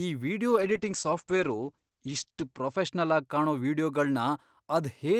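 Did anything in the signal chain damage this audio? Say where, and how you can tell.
Yes. From 0.54 s to 3.31 s a call bitrate drop hits the codec stage: the speech goes muffled and watery, top end falling from 20 kHz to 8 kHz as the rate sinks from 48 to 11 kbps for about 2.1 s, then recovers. Unlike a plain low-pass filter, coding texture coarsens too.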